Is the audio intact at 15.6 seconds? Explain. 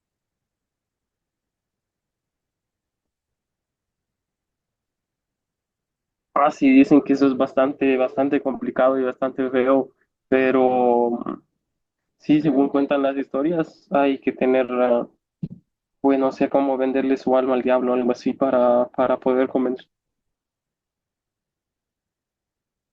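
Yes, at 15.6 seconds the speech plays through intact, with no dropout, click, distortion or other audible fault at that point.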